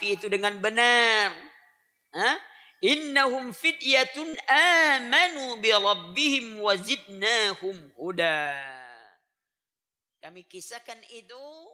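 Around 4.29 to 4.35 s and again at 8.41 to 8.47 s there's short concealed packet loss: about 40 ms went missing each time, and the receiver patched it by extending the preceding sound, leaving a quick smear.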